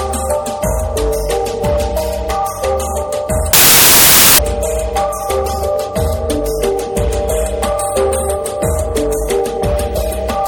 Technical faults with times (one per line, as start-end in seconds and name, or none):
3.53-4.38 samples built from the wrong bytes